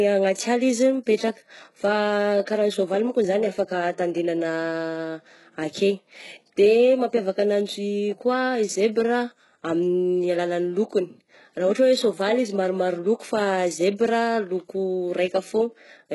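Throughout the speech, treble above roughly 11.5 kHz is absent and sibilants sound gritty and metallic, likely HE-AAC compression rebuilding highs by band replication at a very low bitrate, near 12 kbps.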